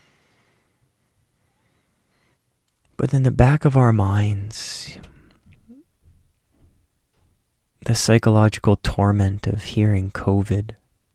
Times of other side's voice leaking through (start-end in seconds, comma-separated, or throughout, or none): none